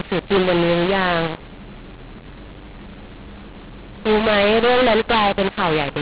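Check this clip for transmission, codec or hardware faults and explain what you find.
The clip has one fault, present for its whole length: a mu-law and A-law mix-up. The speech was encoded with mu-law but decoded as A-law, so each sample's level is mapped to the wrong value. It sounds harsh and distorted, with noise filling the pauses. The G.711 telephone coding underneath works as it should, with the band stopping at 4 kHz, which fits 8 kHz sampling.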